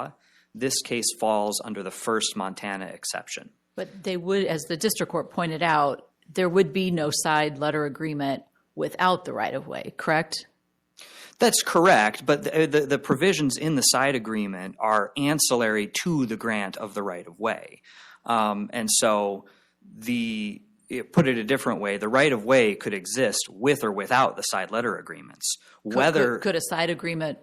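No technical faults can be heard anywhere in this audio.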